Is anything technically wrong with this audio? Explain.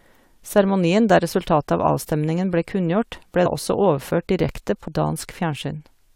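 Yes. Compressed frames were skipped at 3.45 s and 4.87 s. The decoder lost or rejected whole frames, so the speech jumps ahead about 70 ms, then about 200 ms, consistent with 23.2 ms frames. Each join is heard as an abrupt jump forward in the speech.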